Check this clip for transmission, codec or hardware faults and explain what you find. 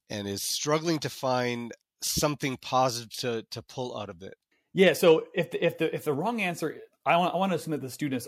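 There's one codec fault in this speech, a case of compressed frames being skipped. At 6.78 s, right after "the if the wrong", the audio suddenly jumps forward by about 50 ms, which fits a couple of frames of roughly 26 ms each. Those frames either never reached the decoder or it threw them out as corrupt. Because adjacent frames overlap, the gap is covered by a short smeared blip rather than a sharp click, and the speech lurches ahead slightly.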